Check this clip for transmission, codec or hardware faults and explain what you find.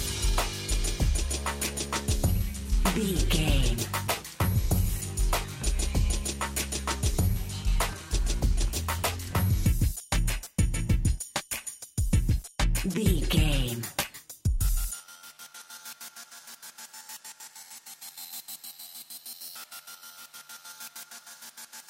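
Nothing in the signal points to a transmission, codec or hardware problem; the audio arrives continuous and intact throughout.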